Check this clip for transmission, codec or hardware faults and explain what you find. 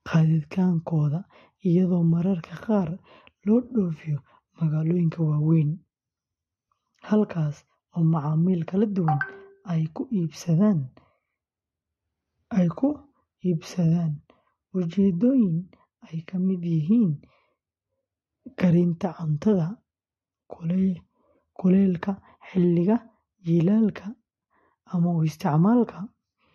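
There's one fault, running the whole way through. Transcoding between lossy codecs: nothing above 12.1 kHz, with two sets of codec artefacts heard together, likely a low-rate Vorbis pass re-encoded to AAC-LC, each adding artefacts.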